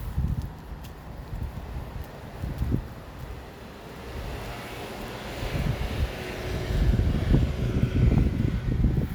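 No technical faults can be heard anywhere in this audio.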